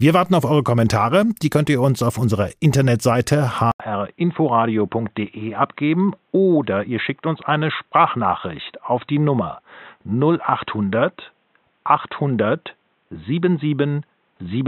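Input switched to a poorer device at 3.72 s, and the speech stays that way to the end of the clip. A gap of about 80 ms marks the changeover. From then on nothing is heard above 3.9 kHz, so the sound turns dull and boxy. A faint new background noise sits well below the speech, while loudness stays about the same. This most likely reflects the recording input moving to a different microphone or a headset's narrowband call profile.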